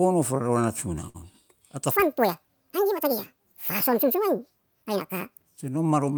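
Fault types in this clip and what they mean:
Short stall from a late packet: at 1.09 s a packet showed up late, so the receiver held the last sound for about 51 ms, then carried on with nothing lost.
Section at the wrong speed: from 1.91 to 5.57 s the speech runs 1.77 times too fast and jumps up close to ten semitones, likely from being played against the wrong clock.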